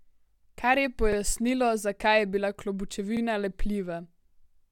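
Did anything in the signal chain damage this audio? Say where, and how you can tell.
Yes, overlapping chunks at the buffer stage: about 44 ms replays at 1.12 and 3.17 s, two seconds apart, because each block restarts before the previous one finished.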